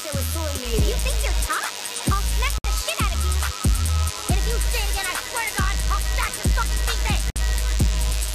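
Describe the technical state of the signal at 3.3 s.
At 3.3 s the signal carries DECT cordless phone buzz, which runs through the whole clip rather than starting or stopping near this point. A nearby DECT handset or base transmits a brief radio burst every 10 ms, and the audio circuitry rectifies it into a 100 Hz pulse train sitting roughly 10 dB below the wanted sound. Mains hum is a smoother tone at 50 or 60 Hz, whereas this buzz is thin and rasping, with a dense stack of harmonics above 100 Hz.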